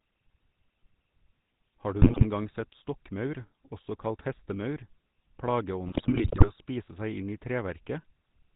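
The speech has a buzzy, gravelly roughness and nothing above 4 kHz throughout. This is the GSM full-rate codec, whose sound fits a 13 kbps stream: it rebuilds the voice from a vocal-tract model driven by coarse, regularly spaced pulses.

From 2.02 to 2.25 s, and again from 5.87 to 6.50 s, the speech breaks into squawks, pops and gargling. These are GSM bit errors. Corrupted filter, pitch and gain values distort the spectrum and level frame by frame, across many frames in the longer burst.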